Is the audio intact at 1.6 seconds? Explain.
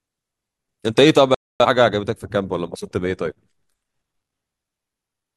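No. At 1.6 s the speech sits inside a digital broadcast dropout running from 1.34 to 1.66 s, where the receiver stopped getting valid frames and muted until clean ones returned. The sound cuts to silence, showing as a flat waveform and a blank vertical band on a spectrogram.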